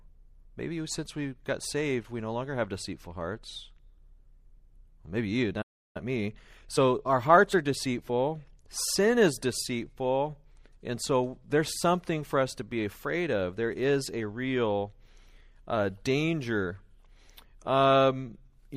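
At 5.61 s the speech cuts out into a playback stall of about 0.33 s, ending at 5.97 s. The output goes silent mid-flow and then resumes where it stopped. The likely cause is the player's buffer running dry or its audio thread being held up.

From 5.97 s to 8.17 s a time-compressed catch-up follows. The player trims its backlog by removing short segments and cross-fading across the joins, so the speech runs about 1.15 times fast at unchanged pitch, starting on the words "sin is deceitful and".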